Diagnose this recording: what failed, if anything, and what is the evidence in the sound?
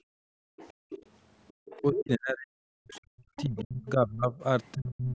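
In the call processing stage, the echo canceller clamped the microphone while the loudspeaker was active. From 0.0 to 0.9 s the background is gated by the echo canceller: room sound drops by about 40 dB, for roughly 0.7 s in total, before the canceller releases.

Echo cancellation is incomplete, so the other side's voice leaks through. A second voice surfaces at 0.57–1.06 s (fairly faint), 1.48–2.01 s (nearly as loud as the talker), 2.93–2.98 s (barely audible) and 3.36–3.89 s (fairly faint). The likely cause is residual loudspeaker echo.

Speech is suppressed in double talk: the talker's voice dips and breaks up from 1.81 to 4.41 s, losing roughly 2 s in total and falling by around 40 dB. It drops again from 4.75 s to the end by around 35 dB. Likely cause: both sides speaking at once.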